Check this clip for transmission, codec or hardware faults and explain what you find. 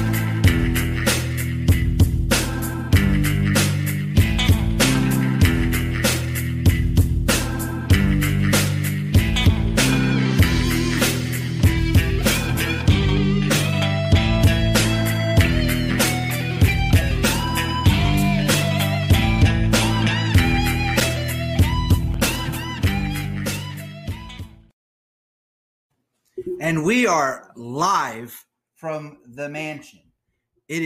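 Nothing stood out on listening as a fault that would call for explanation.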